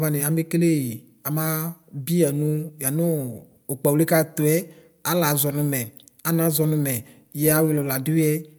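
No technical faults occur at any point, so there is nothing to describe in time order.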